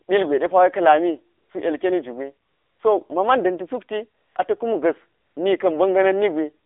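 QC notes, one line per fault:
Throughout: AMR narrowband mobile codec, with content cut off below 300 Hz and above 3.6 kHz. The buzzy, synthetic texture fits a low mode near 7.4 kbps; a spectrogram shows an empty upper band.
1.38–1.50, 2.48–2.80, 4.22–4.36, 5.20–5.36 s: AMR comfort noise, where speech frames stop for 120 to 320 ms and smooth synthetic noise switches in. The waveform shows flat, even-level hiss blocks with abrupt edges.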